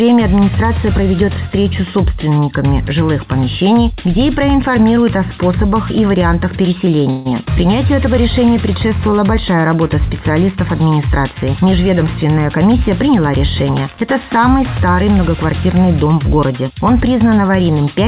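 At 7.10 s the audio stalls for about 0.17 s, to 7.27 s. This is a call audio freeze: the last sound is stretched into a fading buzz-like fill lasting about 152 ms, with no drop to silence. The likely cause is packets held up in transit, leaving the jitter buffer empty. When playback resumes it continues exactly where it stopped, so nothing is lost. A gap has been inserted and the delay grows by about 152 ms.

From 11.54 s to 13.80 s a jitter buffer speed-up follows. Having accumulated more audio than its target, the receiver trims repeated slivers of one or a few pitch periods. Playback runs at about 107% of normal speed with pitch unchanged, which gives that stretch a slightly hurried feel. Around 150 ms is removed in total. Throughout, the call path's 4 kHz bandwidth ceiling and the grainy coding noise typical of G.711 mu-law at 64 kbps remain audible.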